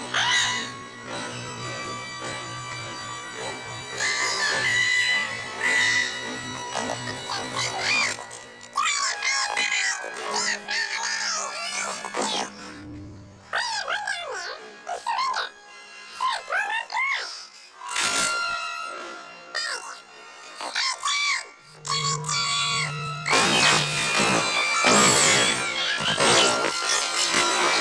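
Nothing stood out as a technical problem on listening to this recording.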